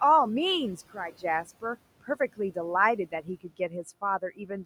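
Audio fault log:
Throughout, noise suppressor artifacts: the room noise, sitting about 19 dB under the speech, gets pulled down by about 18 dB in the gaps and swells back up under the talking. That pumping comes from the suppressor deciding band by band, frame by frame.
0.95 to 1.24 s, one channel drops out: for just under 0.3 s the level slumps abruptly by about 6 dB and then snaps back. That's likely one stereo channel going missing, so the mono sum carries only half of what both sides shared.
3.12 to 3.72 s, speech cut by the noise suppressor: across this stretch the suppressor mistakes bits of the speech for background and ducks them along with it, by up to about 11 dB. Only around a tenth of a second in total gets hit, but those moments sound swallowed and faint.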